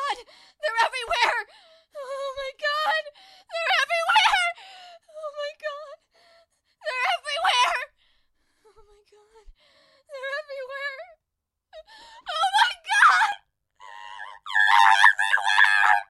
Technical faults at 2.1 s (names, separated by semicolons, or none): none